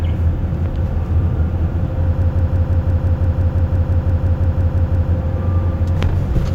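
From 2.22 s to 5.12 s, a system hang loop takes over. The system froze while the sound hardware kept replaying one stored buffer. A 0.17 s slice repeats about 17 times, roughly six per second, giving a machine-gun stutter. This fits an 8192-sample buffer.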